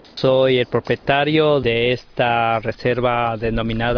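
No technical faults can be heard anywhere in the signal.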